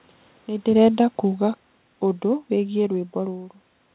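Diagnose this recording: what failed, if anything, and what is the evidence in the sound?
Call processing failed: the automatic gain falling. From 0.7 s the speech sinks steadily until 2.97 s, about 8 dB down. The room noise drops with it. The gain control judged the input too hot or its background noise too strong, and kept turning itself down.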